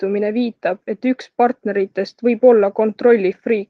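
Nothing goes wrong anywhere in this short bit of speech, so there's no fault to point to at any moment.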